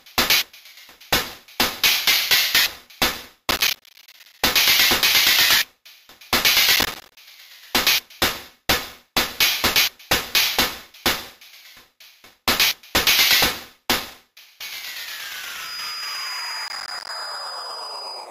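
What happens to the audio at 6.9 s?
At 6.9 s you're in a burst of processor overload crackle, running from 6.76 to 7.17 s: missed roughly 10 ms buffers drop to silence, leaving gritty tearing.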